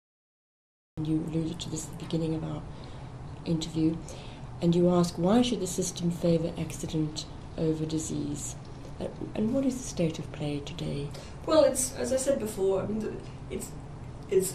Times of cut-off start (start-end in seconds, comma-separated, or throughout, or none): 0.00-0.97